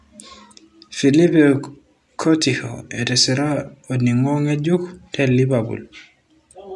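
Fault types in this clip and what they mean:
Nothing stood out on listening to this speech recording.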